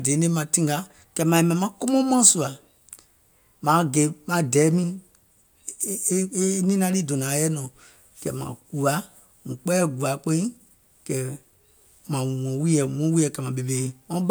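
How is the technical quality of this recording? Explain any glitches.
No glitches or technical faults can be heard anywhere in the recording.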